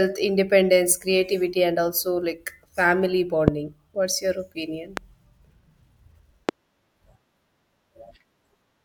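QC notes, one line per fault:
3.48–3.50 s, 4.97–4.99 s, 6.49–6.51 s: loud pop, each a single sharp thump roughly 15 to 20 dB above the speech, which continues underneath. A likely electrical transient or switching glitch adds a brief voltage pulse, shown as a tall waveform spike and a thin full-band vertical stripe on the spectrogram.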